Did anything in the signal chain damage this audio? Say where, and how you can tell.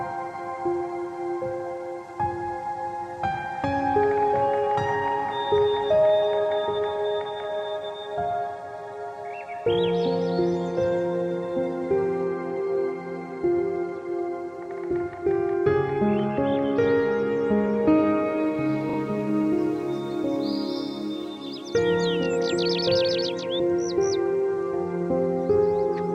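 Yes. At 18.89 to 18.97 s there is a short stutter from repeated frames at the codec or storage stage. A 40 ms block plays twice more, adding 80 ms. That length fits a small run of compressed frames being written or sent again.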